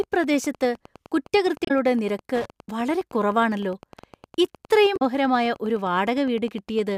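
Speech recording with Wi-Fi interference throughout: a dry ticking close to ten times a second, matching a beacon every 102.4 ms, sitting roughly 25 dB below the speech. A nearby Wi-Fi radio's transmissions are being rectified by the audio circuit and demodulated into audible pulses. Unlike mains buzz, which is a continuous tone at a fixed pitch with harmonics, this is a train of separate clicks whose rate gives away the radio source. Damaged data in a compressed stream also shows up twice, from 1.65 to 1.71 s and from 4.96 to 5.02 s, each about 60 ms long. At those points corrupt bytes in the encoded file made the decoder misread frames and lose sync until it found a valid frame header again, so the speech is briefly disrupted.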